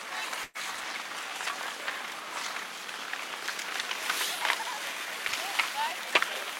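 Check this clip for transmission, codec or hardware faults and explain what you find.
Two faults are audible: a burst of packet loss near the start and loose connector crackle near the end.

From 0.43 to 0.58 s there is a burst of packet loss. About 120 ms of audio never arrived. The receiver stretched the last sound for about 113 ms, fading it out. This is heard as the last sound held and dimming, then a jump ahead.

From 5.28 to 5.36 s there is loose connector crackle. A worn or dirty contact is making and breaking rapidly. This chops the signal for about 80 ms and is heard as a short, irregular burst of scratchy crackle.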